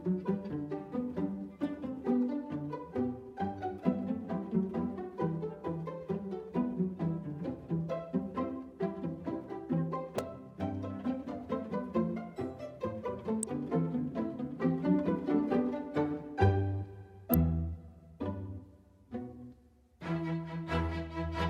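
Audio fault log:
10.18 s, 13.43 s, 17.34 s: electrical switching spike. Three sharp snaps, peaking at about -20 dBFS, then about -15 dBFS twice, sit on top of the sound, likely arcs from nearby switching picked up by the line. Each appears as a thin vertical spike on the waveform and a full-height broadband stripe on the spectrogram.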